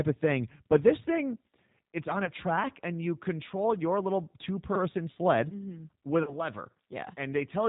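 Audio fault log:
throughout: G.729 codec. Nothing above 4 kHz survives. The sound is plainly rough and synthetic, rebuilt from a filter and sparse pulses, which fits G.729A at 8 kbit/s.
2.25–2.31 s and 6.23–6.36 s: VoIP packet loss concealed by the speech codec. About 20 ms is lost between "this thing it's on" and "track and you control", then about 40 ms later. The decoder stretches its last frame into a fading buzzy tone or coloured noise, and the sound stays weak or distorted briefly after each gap.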